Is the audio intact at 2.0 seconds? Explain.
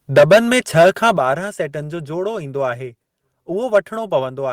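Yes, at 2.0 seconds the speech plays through intact, with no audible fault at that moment.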